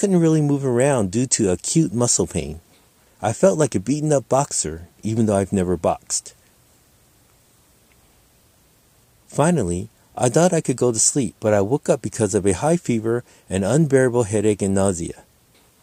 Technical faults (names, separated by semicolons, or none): none